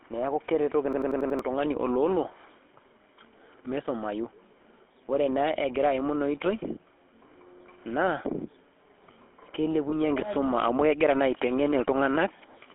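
Throughout, the speech has a buzzy, gravelly roughness and a narrow telephone band, the plainly audible mark of the GSM full-rate codec's pulse-driven vocal-tract model at 13 kbps.

From 0.93 to 1.39 s, one fragment of about 93 ms repeats five times as a machine-gun stutter at 10.8 Hz. This is a system hang loop, with the hardware cycling a buffer that fits 4096 samples while about half a second of audio is lost.

From 9.90 to 9.94 s, just before "enkisuma amu kegira", a brief metallic ring holds the sound. These are lost GSM frames, with a 20 ms gap, likely a single frame, filled by repeating the last good parameters.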